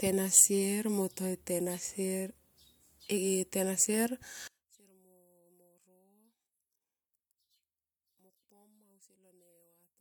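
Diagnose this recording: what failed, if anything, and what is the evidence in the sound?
The wiring is the likely culprit: one stereo channel appears to have been inverted in polarity, with a swapped pair of leads on one side. From 4.48 s to the end of the clip, the mono sum loses the centred speech almost entirely and drops by about 33 dB. Because both channels carry nearly identical material, they cancel against each other, leaving only a faint residue of their small differences.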